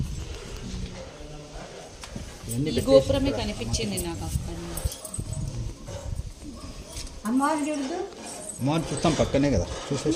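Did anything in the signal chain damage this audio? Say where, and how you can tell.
No, nothing in the signal chain audibly damaged this audio: level, continuity and timing hold steady throughout, with no stage of the path leaving a mark on the sound.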